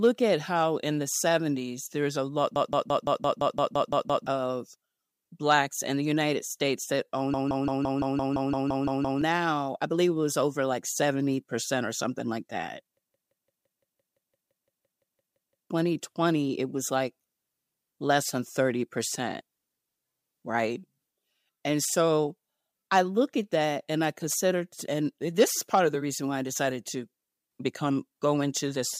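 A system hang loop occurs three times: the driver froze while the hardware replayed one 171 ms buffer, consistent with an 8192-sample ring buffer. Each hang produces a machine-gun stutter at about 5.9 repeats per second, from 2.56 to 4.27 s, 7.34 to 9.22 s, and 12.97 to 15.70 s, and swallows roughly 1.5, 2 and 3 seconds of speech.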